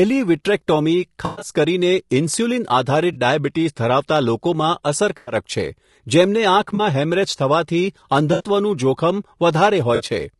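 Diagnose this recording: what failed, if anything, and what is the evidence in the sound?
At the codec stage, the speech was likely squeezed through low-delay AAC compression at a low bitrate, consistent with AAC-ELD at around 32 kbps. Its short frames resolve pitch harmonics poorly, so the voice sounds plainly rough and grainy, with noise filling the gaps between harmonics.

In the network path, AAC frame loss with concealment hits at 1.25–1.49, 3.13–3.16, 5.17–5.35, 6.75–6.81, 8.33–8.43 and 9.95–10.03 s. The decoder rebuilt missing frames from the last good spectrum, leaving smeared, noisy patches. The first spans 0.16 s with gaps totalling 140 ms, its longest around a tenth of a second.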